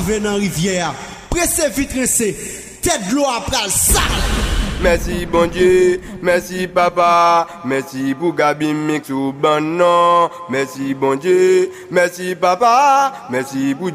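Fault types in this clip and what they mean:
No technical faults can be heard anywhere in this clip. There is nothing to list for it.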